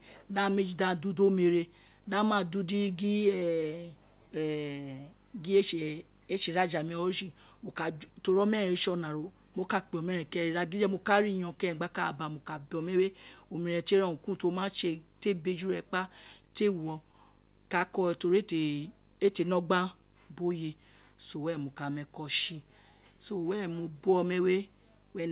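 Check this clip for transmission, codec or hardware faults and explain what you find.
Two transmission faults and one hardware fault run through the whole clip, over a call path whose speech stops at 4 kHz, consistent with G.711 A-law at 64 kbps.

Video or display buzz is present from start to finish. A screen or video cable is coupling into the audio, giving a 50 Hz buzz at the picture's field rate with hash above it, plus a thin whine at 15.6 kHz from the line rate, all at about 30 dB below the speech. Mains hum would share the low fundamental, but it would lack both the ragged hash and that very high line tone.

Clock drift between sender and receiver also lasts the full clip. The sender's audio clock runs about 3% slow relative to the receiver's, so the jitter buffer keeps draining and the receiver has to keep patching in extra material. The result is an unsteady, slightly dragging tempo with small recurring hitches at irregular spacing. 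Packet loss would instead leave isolated gaps or smeared dropouts tied to network bursts, not a steady one-directional drift.

Repeated timing corrections run from 0.19 s to 25.29 s. These are the receiver's response to the slow sender: short pieces are repeated throughout, all in the same stretching direction, so the audio plays at an effective 97% speed and grows by roughly 0.7 s overall. Each edit is tiny and heard, if at all, only as a slight hiccup. Unlike a single buffer underrun, the stalls are spread unevenly across the whole stretch.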